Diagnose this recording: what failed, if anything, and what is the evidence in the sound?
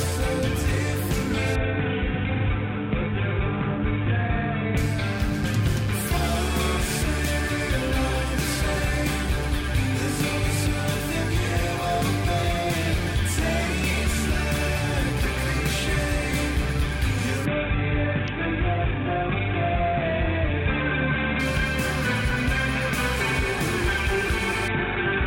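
A steady, raspy mains buzz runs under the whole clip, only about 15 dB below the signal. This is an analogue wiring fault: sharp switching spikes from a dimmer, rectifier or unshielded lead repeat twice per 60 Hz cycle, spreading harmonics up into the kilohertz range.

The top end dulls and gritty noise rises from 1.55 to 4.77 s, 17.46 to 21.40 s, and from 24.68 s to the end. This is a Bluetooth SBC bit pool drop at the codec stage. The sound fits a bit pool falling from 28 to 5, around 54 kbps, which starves the upper sub-bands and coarsely quantises the rest.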